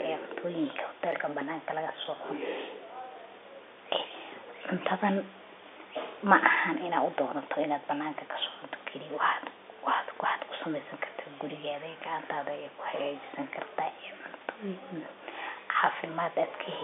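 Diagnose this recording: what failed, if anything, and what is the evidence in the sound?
Nothing in this recording points to a failure at any stage of the chain. The speech sits in a narrow telephone band of roughly 300 Hz to 3.6 kHz, consistent with G.711 telephone coding on an ordinary line, with the room noise lying about 34 dB beneath it.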